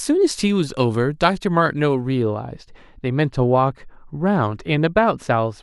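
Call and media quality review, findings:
Speech dull and muffled from 2.22 s to end of clip (5.63 s). Smooth treble roll-off, about 13 dB down at 10 kHz relative to 1 kHz. Probable component: playback or decoder filter stage. Mechanism: de-emphasis applied wrongly, either to a signal never pre-emphasised or a second time.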